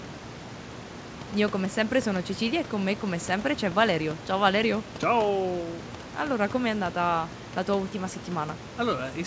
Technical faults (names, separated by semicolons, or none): none